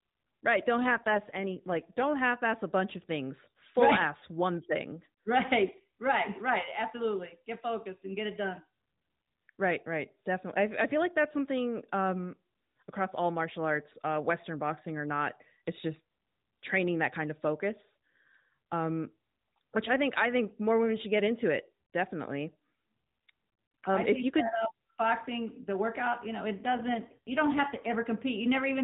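This speech clip turns briefly rougher and more synthetic from 0.78 to 2.17 s, just before "half ass a bunch", and from 26.54 to 27.96 s, after "the workout you know". Both are AMR rate drops on the narrowband mobile codec, which fits a fall from 12.2 to 5.9 kbps.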